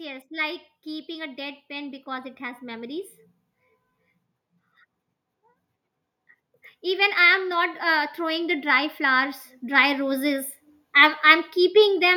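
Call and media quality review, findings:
Automatic gain rising, 0.29–3.12 s (about +6 dB) and 6.79–11.24 s (about +9 dB): AGC boosting quiet input. Background noise swells alongside speech, unlike talker moving closer.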